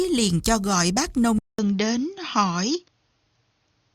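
At 1.39 s the sound drops out for about 200 ms, then returns duller and boxier, with nothing above 6.6 kHz and a faint new noise floor at roughly the same loudness, most likely from the input switching to a poorer device for the rest of the clip.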